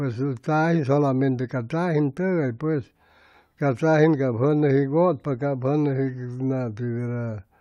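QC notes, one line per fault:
No technical faults can be heard anywhere in the signal.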